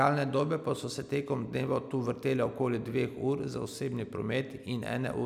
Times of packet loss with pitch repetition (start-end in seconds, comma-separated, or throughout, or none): none